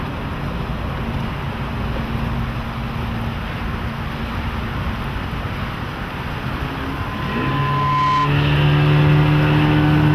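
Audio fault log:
6.91–8.34 s, loudspeaker feedback squeal: a pure tone near 1 kHz swells over roughly a second into a piercing squeal that ends up a few decibels louder than the surrounding audio. The microphone is picking up the loudspeaker it feeds, and at that one frequency the loop gain exceeds unity, so the tone keeps amplifying itself until it stops at 8.34 s.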